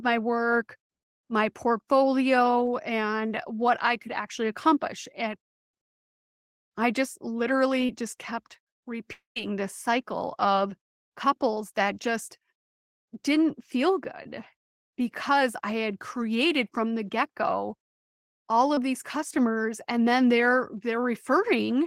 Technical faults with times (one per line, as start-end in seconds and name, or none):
7.85-7.91 short concealed packet loss
9.13-9.38 long network dropout
14.24-14.27 short concealed packet loss
18.75-18.79 short concealed packet loss